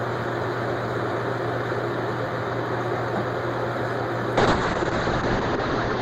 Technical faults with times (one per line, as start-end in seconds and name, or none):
4.39-6.01 call bitrate drop